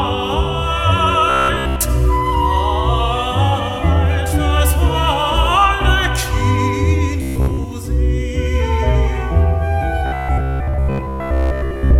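From 1.30 to 1.84 s, 7.22 to 7.64 s and 10.06 s to the end, robotic sound from repeated short buffers gives a rigid 66.7 Hz buzz, likely from a 15 ms chunk replayed through most of each span. The waveform shows identical repeating cycles, and the spectrogram shows evenly spaced harmonic stripes.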